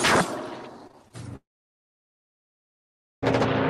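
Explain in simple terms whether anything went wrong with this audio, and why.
Small pieces of the audio stream arrived too late to be played, a problem called short concealed packet loss. It happens three times close together: from 0.87 to 0.97 s, again at 0.91 to 0.95 s, and at 1.08 to 1.12 s. Each time about 20 ms of sound was missing, and the receiver covered the gap by briefly stretching the sound just before it. You hear this as quick smears or wobbles, and the first one also adds a slight delay.

Shortly afterwards, from 1.36 to 3.24 s, the sound cuts out for almost two seconds. It briefly trails off and then goes silent for about 1.8 s before the audio returns, with that stretch simply gone. This is most likely a long network dropout, where nothing reached the receiver for that whole time, so it had nothing to play.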